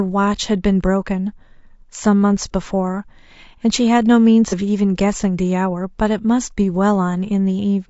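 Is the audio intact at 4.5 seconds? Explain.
No. From 4.49 to 4.54 s there is AAC frame loss with concealment. About 30 ms of coded audio is missing, which fits a single lost frame. The decoder patches the gap from the last good spectrum, producing a brief smeared, noisy, phasey blip. On a spectrogram the harmonic lines blur into a short noisy smudge. The waveform shows a small irregular stretch there.

That moment also carries the clip's rough, grainy texture, likely from low-delay AAC compression at about 32 kbps. At this low bitrate coarse quantization leaves noise between the pitch harmonics, visible as haze between the harmonic lines, and the top band looks thin.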